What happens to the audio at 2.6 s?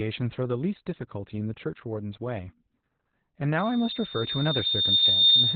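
At 2.6 s the speech carries Opus voice compression, present throughout: muffled, hoarse and faintly robotic. Unlike a plain low-pass filter, the coarse excitation coding adds roughness, consistent with narrowband SILK near 8 kbps.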